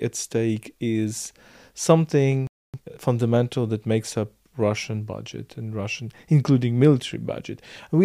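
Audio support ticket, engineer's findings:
Playback stall, 2.47 to 2.74 s: speech cuts to silence mid-flow for 0.27 s, likely an output buffer underrun or a blocked player thread. Resumes where it stopped.

Time-compressed catch-up, 2.74 to 3.00 s: speech rushed at 2x speed immediately after the gap, pitch unchanged. Player draining its backlog. Not a resampling speed-up, which would raise pitch.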